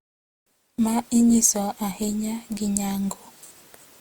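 Throughout the speech, the likely cause is generation loss: the audio seems to have gone through Opus around seven times, consistent with 64 kbit/s passes, each re-quantising on a shifted frame grid. The errors pile up into a swirly, hollow, smeared sound with blurred consonant attacks, though content still reaches 20.2 kHz.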